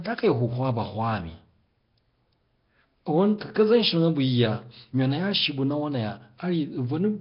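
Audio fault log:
throughout: Nellymoser compression, likely from the Flash-era Nellymoser Asao codec. The speech carries a rough, hissy halo and sounds smeared, as if heard underwater. Nothing is present above 5.3 kHz, so the top end is dull. The damage is heavy, which fits a low rate of about 22 kbps. The codec spends a fixed small budget on each short block. Weak bands get no bits and are refilled with noise, which creates the hiss and blur.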